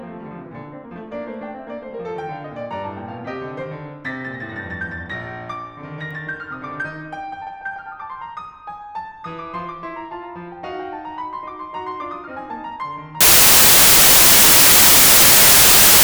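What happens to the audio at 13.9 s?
Wrong sample width runs 13.21 s to the end. Packed 24-bit data read as 16-bit buries the music in loud noise, slow and low-pitched.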